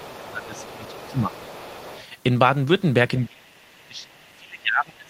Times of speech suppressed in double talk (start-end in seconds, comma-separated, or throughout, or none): 0.00-1.43, 3.18-3.57, 3.86-5.09